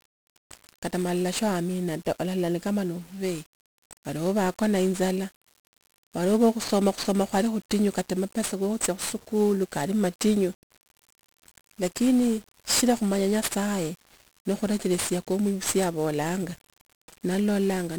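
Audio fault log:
Throughout: 1-bit DFPWM compression. The speech sounds fuzzy and crackly from start to finish, with a dense broadband hiss sitting over everything and the treble largely buried beneath it. The damage is heavy and points to a very low rate, consistent with roughly 48 kbps. With only one bit per sample, the encoder can just nudge an adaptive level up or down each step. It never lands on the true waveform, and the constant overshoot becomes that coarse noise floor.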